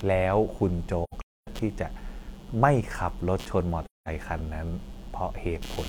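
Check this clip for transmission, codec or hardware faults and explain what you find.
Two faults are audible in this speech: a computer activity noise under the whole clip, and two dropouts caused by AAC frame loss with muting.

Computer activity noise runs throughout as a fine buzzing, chirping texture pulsing at around 150 Hz, roughly 25 dB below the speech. It follows the machine's workload rather than the talking, because processor or peripheral load shifts the shared ground that the audio circuit references.

AAC frame loss with muting produces two soft-edged holes. The speech fades out and back in from 1.04 to 1.48 s, where about 341 ms is missing, mostly in one run of around 300 ms. A second gap follows from 3.85 to 4.08 s, about 213 ms long. In both, the decoder zeroed the missing frames, and the overlapping windows smoothed the edges.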